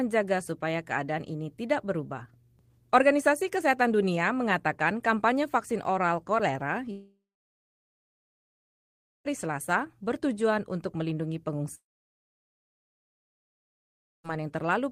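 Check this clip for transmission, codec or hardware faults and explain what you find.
Two faults stand out, both the same kind: a long network dropout at 6.91 to 9.27 s and again at 11.75 to 14.26 s. Each time the sound stops being fed, and the last moment is stretched into a brief fading buzz before near-silence holds for about 2.1 s and then 2.4 s. The likely cause is a break in packet delivery that concealment can only bridge briefly. About 2.3 s and 2.5 s of material are simply gone when the audio resumes, which separates this from a short packet-loss glitch or a deliberate mute.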